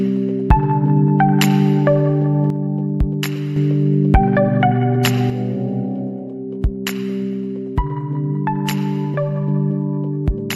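From 2.50 to 3.56 s and again from 5.30 s to the end, the sound abruptly drops by about 6 dB, recovering sharply after the first gap. The likely cause is one channel dropping out, halving the shared content once summed to mono.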